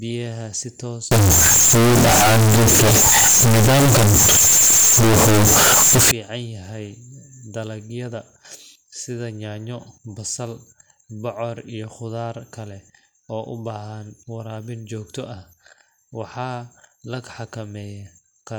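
From 1.11 s to 6.11 s, just after "si toos" and until "yahay dalagyada", the speech turns very loud and harsh. The waveform sits at an almost fixed, high level as a nearly square block. Background noise is as loud as the speech, though the pitch can still be followed. This is float read as integer. The likely cause is 32-bit float samples read as 32-bit integers, so the sign and exponent bits set each value instead of the true level.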